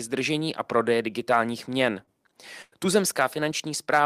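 At 1.91 to 1.93 s, just after "držení a prodeje digitálních", comes a lost packet rebuilt from error correction. A low-bitrate copy carried in the next packet filled those 20 ms. There is no gap. The rebuilt slice sounds briefly rougher and noisier.

At 2.03 to 2.09 s there is a short concealed packet loss. About 40 ms never arrived in time. The decoder extended the preceding sound for roughly 35 ms, then blended back. It is heard as a quick smear or wobble.

From 2.62 to 2.74 s a burst of packet loss removes about 100 ms. The decoder stretched the last sound over roughly 98 ms and faded it, so it becomes a held buzz or dying hiss. The final 20 ms, 2.72 to 2.74 s, was again a lost packet rebuilt from error correction. That coarse copy bridges into the returning speech, which resumes with material missing.

At 3.50 to 3.52 s another 20 ms packet was rebuilt from error correction. It gives a brief grainy, noisier patch with no break in the sound.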